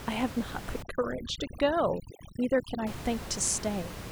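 A speech clip in which, from 0.82 to 2.87 s, the background collapses to near silence flecked with twinkling specks. This is overdone noise removal: a noise reducer set too aggressively is switching off individual frequency bands it mistakes for noise, taking quiet parts of the voice with them, against room noise sitting about 10 dB below the speech.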